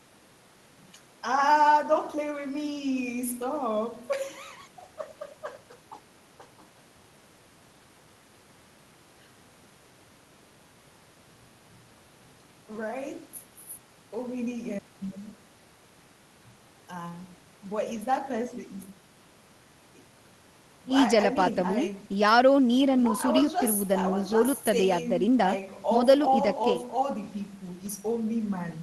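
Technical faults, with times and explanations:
No technical faults detected.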